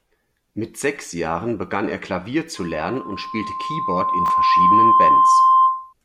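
A loudspeaker feedback squeal begins at 2.56 s and runs to 5.93 s. The microphone is picking up the loudspeaker it feeds, and at 1 kHz the round trip through the loop gains more than it loses, so that frequency keeps reinforcing itself. It is heard as a single steady tone rising out of the speech, swelling over roughly two seconds until it sits well above the voice, somewhere around 15 dB louder, and it persists almost to the end of the clip.

Chunks out of order occur between 4.26 s and 4.30 s, while the squeal is still sounding. One block of audio, about 20 ms long, arrived or was written one chunk late, so it plays after the block that should have followed it. No audio is missing, but the swapped pair creates hard joins at the edges of the misplaced blocks, heard as a brief jumbled stutter over 40 ms.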